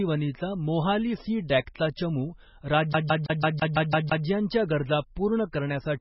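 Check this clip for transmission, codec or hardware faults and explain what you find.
Two faults are present: codec damage across the whole recording and a skipping-disc stutter in the middle.

Throughout the speech, the sound is watery and swirly, with nothing above 5.6 kHz. The likely cause is heavy MP3 compression, consistent with a bitrate near 16 kbps. Starved of bits, the encoder drops weak frequency lines frame by frame and cuts the treble outright.

From 2.93 to 4.26 s, a CD stuck on one turn produces a fast, even stutter. The same 0.17 s of audio plays 8 times, about six times a second, with a brief mute at each jump. A scratch sends the laser back one track at the same point on every rotation.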